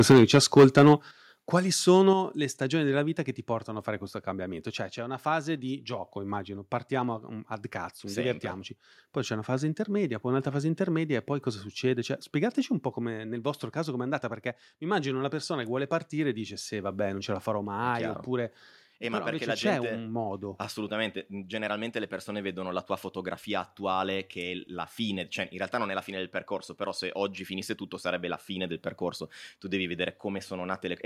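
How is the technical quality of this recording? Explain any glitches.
The recording has two related problems in its first few seconds: the speech opens distorted, then drops abruptly in level three times.

Microphone overload, 0.00 to 0.93 s: the loudest speech peaks are flattened, about 10 dB over full scale on a noticeable share of samples, giving a harsh, crackling edge. The likely cause is input gain set too high for the converter.

Microphone volume stepped down, at 0.12 s, 1.11 s and 2.13 s (just before "le stagioni della vita"): the speech and background fall suddenly by about 3 dB, 8 dB and 5 dB, likely as software lowers the input volume in single steps after detecting the overload.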